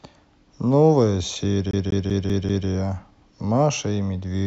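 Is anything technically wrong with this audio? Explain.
Yes. From 1.71 to 2.68 s the speech gets a CD stuck on one turn: the player keeps jumping back, replaying the same 194 ms five times with little mutes, a quick even stutter.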